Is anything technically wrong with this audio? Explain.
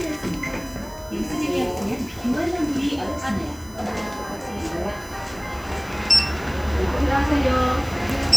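Yes. A USB whine runs through the whole clip: a steady, fixed-pitch tone at 1 kHz, strongest at that frequency and sitting roughly 20 dB below the sound itself. It comes from the USB bus drawing current in regular 1 ms frames, which leaks into the audio path through shared power or ground. Unlike mains hum, which sits at 50 or 60 Hz and its harmonics, this whine is much higher in pitch.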